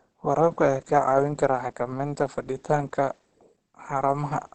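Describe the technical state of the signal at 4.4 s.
At 4.4 s the speech carries Opus compression throughout the clip, likely from its SILK speech mode at a rate near 16 kbps: muffled, hoarse, nothing above 8.5 kHz, with less swirling than MP3.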